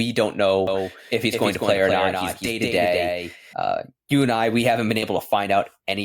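From 0.67 s to 3.53 s the speech has a doubled audio track: a second full-band copy trails about a fifth of a second behind, roughly 5 dB quieter and dry. It likely comes from a second, slower capture path. On a spectrogram every syllable is traced twice, offset in time, and the echo starts and stops abruptly. At 2.45 to 2.48 s, inside that stretch, and again at 5.02 to 5.05 s just after "I we haven't been", compressed frames are skipped. The sound jumps ahead about 20 ms and then about 10 ms, which fits dropped 10 ms frames. Each skip appears on the waveform as a small discontinuity.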